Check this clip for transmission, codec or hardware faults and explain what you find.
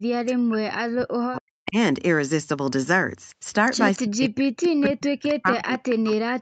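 Two kinds of fault are audible.

From 0.0 to 1.77 s, and again from 4.03 s to the end, the speech dips sharply, falling by roughly 40 dB at its deepest. This is likely speech suppressed in double talk: an echo canceller treated the talker as loudspeaker echo and attenuated it.

At 4.85 to 4.89 s and 5.29 to 5.34 s, brief faint scraps of a delayed copy of the speech appear, trailing by about 279 ms and sitting roughly 20 dB below the main speech. This echo leak likely comes from a far-end loudspeaker whose echo canceller let part of the microphone pickup through. The band tops out at 8 kHz, which fits a wideband call codec.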